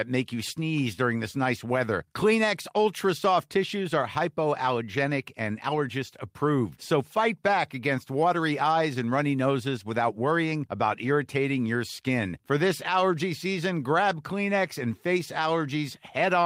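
No technical faults are audible at any point in the speech recording.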